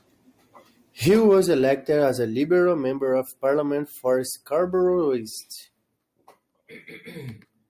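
Nothing stood out as a technical problem on listening to this speech recording.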